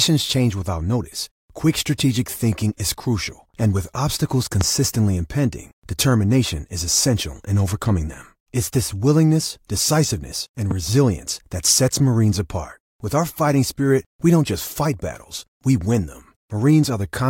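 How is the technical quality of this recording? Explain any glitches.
Two loud pops interrupt the speech, at 4.61–4.64 s and 10.71–10.73 s. Each is a single sharp thump about 20 ms long, the first around 15 dB above the surrounding level and the second around 10 dB. The likely cause is a brief voltage pulse, from a switch, connector or static discharge, entering the chain and being shaped by the circuitry after it. The speech carries on underneath. On a waveform each appears as a tall, isolated spike. On a spectrogram each shows as a thin vertical line spanning all frequencies.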